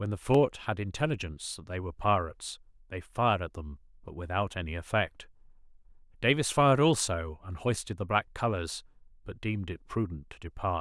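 Speech, with two isolated sharp clicks, at 0.35 s and 4.08 s. Each is a single brief tick with no gap in the sound, and in a spectrogram it shows as a thin vertical line across the whole frequency range. These are likely dropped samples: a fraction of a millisecond of the stream goes missing, so the waveform jumps abruptly from one value to a later one. That step discontinuity is what produces the click.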